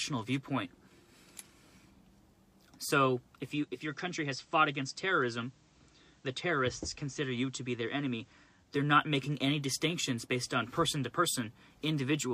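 At 3.50 s the receiver loses its digital signal and performs a digital radio blending to analogue, cross-fading over 426 ms to the FM broadcast of the same station. The level drops by about 3 dB, and a hiss floor appears around 35 dB below the signal. At 8.85 s it blends back to digital, restoring the level.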